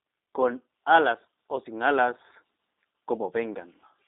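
Speech sent through a G.729 codec throughout, consistent with an 8 kbit/s G.729A link, comes out rough and synthetic, confined to a 250 Hz to 3.7 kHz band with nothing above 3.8 kHz.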